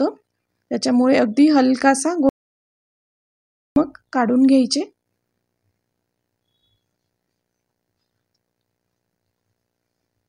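At 2.29 s the sound cuts out abruptly. What follows is silence, with no room tone or background hiss underneath it. It lasts until 3.76 s, when the audio returns just as suddenly, mid-flow. About 1.47 s of material is simply missing. This is an audio dropout to silence. The likely cause is a brief loss of the input signal, such as a disconnected device or failed link, while recording continued writing silence.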